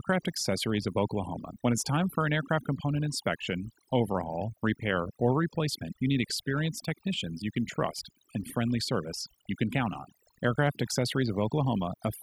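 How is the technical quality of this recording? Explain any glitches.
The technical quality is weakened by overdone noise removal, present from start to finish. A noise reduction stage was pushed too hard. It cuts individual frequency bands steeply whenever they sit close to its noise estimate. Quieter parts of the speech fall below that line and vanish with the noise. The pauses drop to near silence, dotted with twinkling specks.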